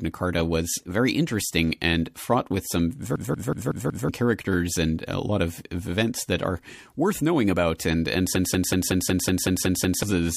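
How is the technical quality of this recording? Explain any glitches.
The recording has two kinds of glitches: a repeated freeze that loops audio twice, and one smeared attack from lossy coding.

System hang loop, 3.16–4.09 s and 8.36–10.03 s: the playback system stalled while the sound hardware kept replaying its ring buffer. A 186 ms slice repeats at about 5.4 Hz, which fits an 8192-sample buffer. That gives a machine-gun stutter. After "and fraught with some" it repeats five times and resumes at "characters and a lot", losing about a second of audio. The second loop repeats nine times and swallows roughly a second and a half.

Pre-echo at 7.78 s, just after "that are worth knowing": the transform codec spread its quantisation noise across a block of about 36 ms without switching to short blocks. So noise about 13 dB above the background fills the 19 ms before a sharp onset, heard as a brief hiss and a softened attack.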